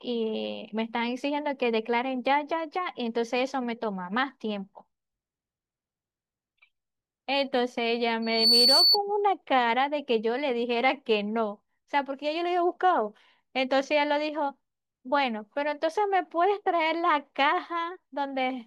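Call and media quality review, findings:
Single piercing tone at 4.5 kHz, 8.22–8.98 s, swelling over about a third of a second to roughly 10 dB above the speech. Loudspeaker feedback squeal: mic re-capturing its own speaker output, loop gain exceeding unity at 4.5 kHz, tone self-reinforcing until the loop breaks.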